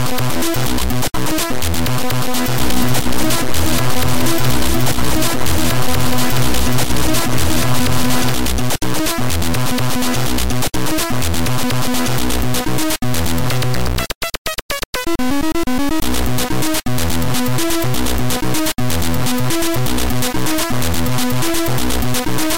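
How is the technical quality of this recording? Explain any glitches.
There is one glitch. From 2.6 to 8.3 s, a doubled audio track: a second copy, about 5 dB quieter, trails around 400 ms behind, then cuts off abruptly, likely from an out-of-step duplicate.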